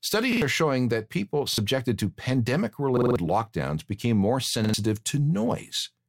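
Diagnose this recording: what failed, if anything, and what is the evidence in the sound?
The speech stutters four times, each a fragment of about 46 ms replayed with hard joins: 0.33 to 0.42 s, 1.53 to 1.58 s before "to pandemic", 2.97 to 3.16 s before "lockdowns became more", and 4.64 to 4.74 s after it. The third is the longest, with four extra plays. This is a repeated buffer at the driver or buffer stage. New audio arrived late, so the device replayed its last block, which fits a 2048-sample buffer, and up to a fifth of a second of real audio is lost.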